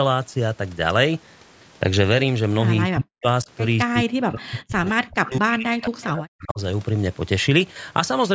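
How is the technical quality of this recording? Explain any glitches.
The speech is repeatedly turned down, a fault known as speech suppressed in double talk, at 2.93 to 3.27 s, 3.44 to 3.49 s, 3.86 to 4.89 s and 5.08 to 6.6 s. The level falls by up to about 40 dB, and by only about 10 dB in the brief second dip. The likely cause is an echo canceller that, with both sides talking at once, treated the talker as loudspeaker echo and attenuated it.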